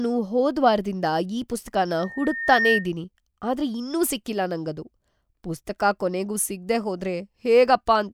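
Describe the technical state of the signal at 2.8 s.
At 2.8 s the microphone is picking up the loudspeaker it feeds, and the loop gain at 1.8 kHz exceeds one, causing loudspeaker feedback squeal from 1.99 to 2.89 s. The tone swells over roughly 0.7 s into a squeal about 5 dB above the speech.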